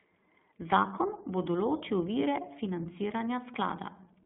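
iLBC codec damage runs through the whole speech clip. Each 20 ms frame is coded on its own, with the band held to about 200 Hz to 3.7 kHz, so the speech sounds thin, a little rough and synthetic, consistent with a rate near 15.2 kbps.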